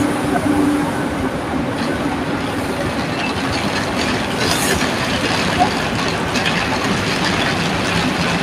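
No technical faults can be heard anywhere in this audio; the signal stays continuous and stable throughout.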